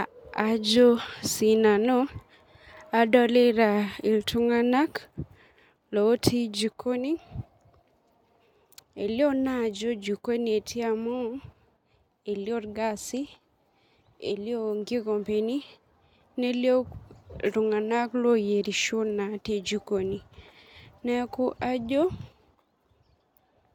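No technical faults can be heard anywhere in this speech recording. There is nothing in it to place on a timeline.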